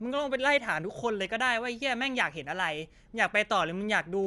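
Throughout the speech, the sound is dull, and a rough, fluttering noise clings to tonal parts. This is likely Dolby Digital compression at a low rate such as 64 kbps. Unlike a plain low-pass filter, dropped detail returns as noise fill.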